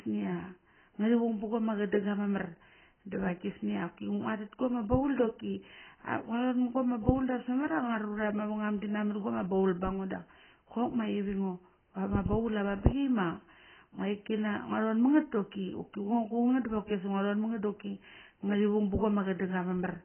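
From start to finish the speech is dull and muffled, with a hard ceiling at 3.1 kHz and a watery, warbling smear over sibilants and held vowels. The likely cause is heavy AAC compression, with the encoder starving the spectrum at a rate that fits roughly 12 kbps, discarding the top end and coarsely quantising what remains. A spectrogram would show a flat-topped band-limit at 3.1 kHz with blotchy gaps and smeared patches below it.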